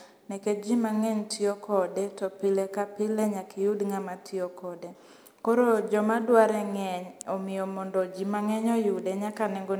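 No technical faults can be heard anywhere in this speech recording.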